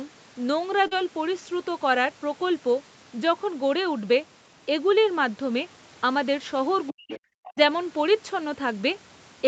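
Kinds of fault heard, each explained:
Short concealed packet loss: at 0.87 to 0.93 s about 40 ms of audio failed to arrive in time, and the decoder bridged roughly 36 ms of it by extending the preceding sound, following its pitch where it was voiced and using shaped noise where it was not, before blending back into the real signal. It comes across as a brief smear or wobble in the speech, short enough to swallow a quick consonant.
Speech suppressed in double talk: the talker's level collapses from 6.90 to 7.12 s, falling by about 40 dB at its deepest, and again from 7.48 to 7.59 s by about 30 dB, so the speech dips for roughly 200 ms and then 100 ms. The likely cause is an echo canceller meeting both sides talking at once, unable to tell its own talker from loudspeaker echo, and turning everything down.
Other side's voice leaking through: a faint second voice surfaces from 7.12 to 7.20 s, about 15 dB below the main speech, and again from 7.46 to 7.50 s at about 20 dB below, in short scraps beside the talker's own speech. 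This is likely the far end playing from a loudspeaker into the microphone, with the echo canceller leaving part of it behind, right around the moments where the talker's own level is being suppressed.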